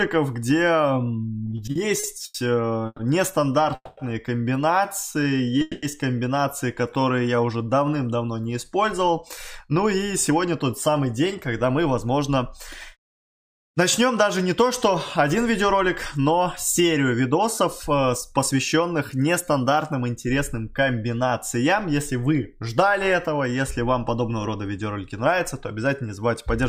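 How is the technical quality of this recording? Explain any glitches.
The recording has clear network-delivery faults in its first half, then a long stretch of hurried playback.

Repeated stalls (stutter) run from 1.45 to 2.36 s. The buffer ran dry seven times, so the sound hangs and drags in short hitches up to 90 ms long.

Call audio freezes occur at 2.86 to 3.01 s, 3.75 to 3.99 s and 5.62 to 5.85 s. Each likely came from held-up packets, with the last sound stretched into a fading buzz before playback resumes.

Jitter buffer slow-down affects 5.12 to 5.58 s and 6.81 to 7.57 s. Repeated pitch periods play the sound at 88% speed, drawn out but unchanged in pitch.

Jitter buffer speed-up runs from 9.01 to 18.80 s. Trimmed pitch periods push playback to 106% speed, removing roughly half a second and sounding rushed.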